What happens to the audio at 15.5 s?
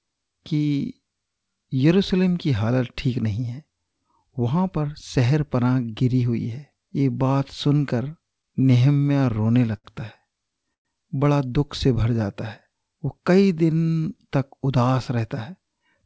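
At 15.5 s you're in the middle of a jitter buffer speed-up that runs from about 14.51 s to 16.03 s. The receiver had built up more buffered audio than it wanted, so it kept trimming out tiny pitch-period-sized slices, about 150 ms in all, to catch up. The speech plays roughly 9% fast while keeping its pitch, so it comes across rushed, over the band-limited call sound that stops at 8 kHz.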